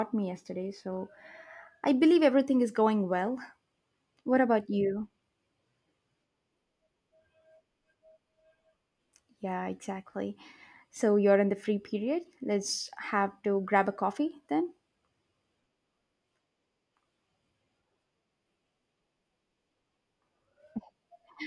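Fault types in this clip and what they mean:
No technical fault can be heard in this speech recording. There is nothing here to list for any category.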